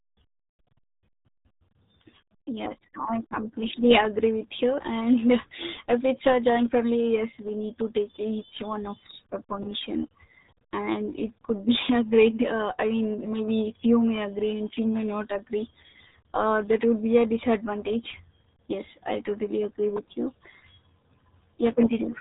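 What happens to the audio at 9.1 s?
At 9.1 s, as across the whole clip, the speech has passed through the RealAudio 14.4 codec, a low-rate scheme whose heavy damage points to about 8 kbit/s. Nothing above 3.8 kHz survives, so the speech sounds muffled and gargly.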